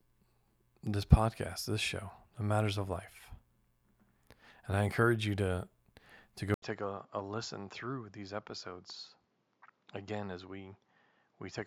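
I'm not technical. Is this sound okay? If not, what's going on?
No. At 6.54 s a short gap is followed by duller, quieter speech with new background hiss, most likely an input switched to a poorer device rather than a simple volume change.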